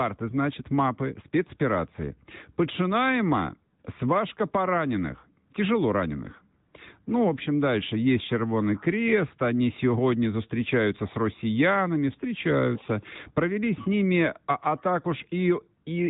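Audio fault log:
Throughout, AMR narrowband mobile codec: the speech is squeezed into a phone-line band with nothing above 3.8 kHz, and it carries a plainly audible buzzy, synthetic edge. That texture comes from the codec rebuilding each frame from a vocal-tract model fed by a handful of pulses rather than sending the waveform itself, and the degree of damage fits a mid-range rate near 10 kbps. A plain low-pass filter would only dull the sound. This one also sounds processed.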